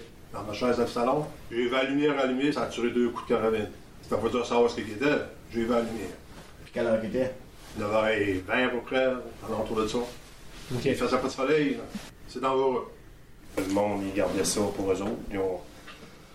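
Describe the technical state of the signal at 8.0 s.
At 8.0 s the signal is intact, with no audible fault at that moment.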